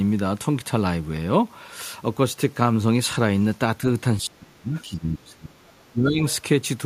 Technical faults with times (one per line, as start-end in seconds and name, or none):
4.23-6.20 speech suppressed in double talk
4.76-4.81 other side's voice leaking through